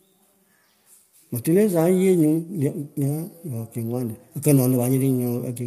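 Throughout the speech, the sound is plainly rough and grainy, with a noisy haze between the pitch harmonics and nothing above 15.6 kHz. The likely cause is low-delay AAC compression (AAC-ELD). Its short frames resolve harmonics poorly, and the damage fits a bitrate around 32 kbps.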